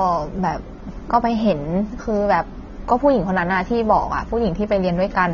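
Heavy lossy coding, likely AAC compression at a low bitrate, runs through the whole clip. With too few bits to spend, the encoder dropped everything above about 7.1 kHz and coarsely quantised what remained, a degree of damage that fits an AAC-LC stream of around 24 kbps. The speech therefore sounds dull and muffled, sibilants lose their crispness and turn fizzy, and sustained vowels carry a plainly audible warbling, smeared texture from start to finish.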